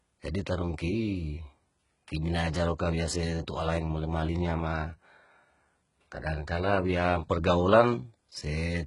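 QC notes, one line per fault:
Throughout, HE-AAC compression: the speech has nothing above 11.1 kHz, and its treble sounds synthetic, with heavily gritty, lisping s sounds. The likely cause is spectral band replication rebuilding the top band from copied lower bands, which fits a bitrate around 12 kbps.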